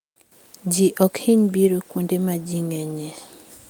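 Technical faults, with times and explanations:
No technical faults can be heard in this speech recording; the signal holds steady with no interruptions or disturbances at any point.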